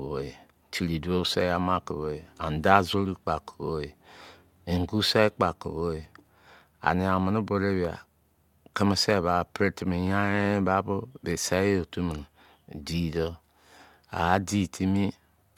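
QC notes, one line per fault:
No faults to note in this speech clip.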